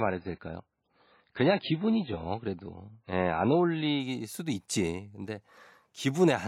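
Speech, with an adaptive stream starting at a low bitrate. Until 4.0 s it sounds dull and artefact-heavy, with nothing above 5 kHz. That fits an 18 kbit/s MP3 stream. Clarity then jumps without a gap, which fits a switch to 128 kbit/s.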